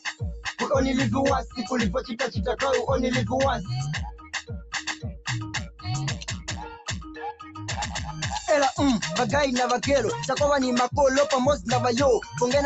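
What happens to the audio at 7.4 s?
Right around there you're in a stretch where the noise suppressor cut the sound, from 6.14 to 7.62 s. It mistook the sound for noise and pushed it down by as much as about 15 dB, so it sinks in level or its tail gets chopped short.

More broadly, a speech noise suppressor is running on the whole track. It keeps riding held tones and ambience up and down by about 10 dB, so the sound pumps or thins out.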